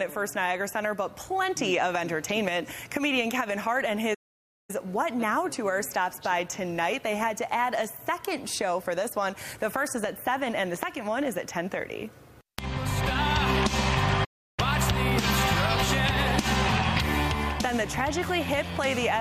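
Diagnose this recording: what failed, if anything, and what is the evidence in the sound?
The playback stage failed twice: the player most likely ran short of buffered data, or its output thread was held up, so nothing reached the output until it caught up. The result is a playback stall, where the sound stops abruptly in mid-flow and drops to silence, first from 4.14 to 4.70 s (about 0.55 s) and again from 14.24 to 14.60 s (about 0.33 s), before resuming.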